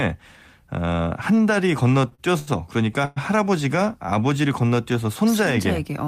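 Around 2.09 s, 2.15 s and 2.39 s, the speech briefly sticks, each sound held a moment too long with a faint buzz or dip. These are short stalls from a late packet: the jitter buffer emptied, and the receiver stretched the last sound by 17, 33 and 82 ms before resuming with nothing lost.

From 3.05 to 3.18 s the speech freezes into a fading buzz or hiss that never drops to silence, a call audio freeze. Packets were likely held up in transit, so the receiver extended the last sound for about 113 ms, then continued where it had stopped.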